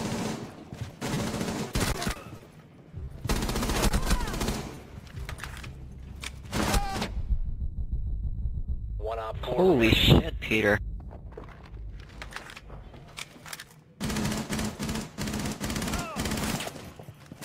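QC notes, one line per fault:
1.06–2.70 s, jitter buffer slow-down: The receiver's buffer ran short, so it stretched the audio by repeating single pitch periods and slivers of pauses, adding 43 ms over this span. Playback drops to 98% speed while pitch stays put, giving slightly drawn-out sounds. Unlike the packet loss overlapping it, the slow-down itself removes nothing.
1.14–3.13 s, repeated packet loss (robotic sound): Ten gaps arrive in quick succession, about 10% of the span, the longest 30 ms. Together they amount to 100 ms of missing audio, patched with 190 ms of concealment that continues the previous sound. Because each patch is followed soon by another, the result is choppy, with fragments dropping out. That choppy texture across two seconds is what separates it from an isolated concealed loss.
3.89–3.93 s and 4.75–4.79 s, short concealed packet loss: Each event loses 20 ms of audio, filled by 20 ms of extrapolated sound, pitched if voiced or shaped noise if not, then crossfaded back into the real signal. 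Each is heard as a single brief smear, and a short consonant-like sound could vanish within it. Being a lone event rather than a dense run, it lacks the robotic character of the earlier stretch.
6.85–8.90 s, jitter buffer speed-up: The buffer held more audio than its target, so the receiver trimmed short pieces of one or a few pitch periods repeatedly, removing about 50 ms in total. The sound runs at 102% speed at unchanged pitch. Compared with the slow-down earlier, the effect is compression rather than stretching.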